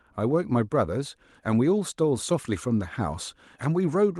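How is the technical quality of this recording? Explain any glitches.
Nothing here stands out as a glitch at all; the speech comes across steady and unbroken, with the cut-off top end, around 12 kHz, you'd expect from a call codec running at a modest bitrate.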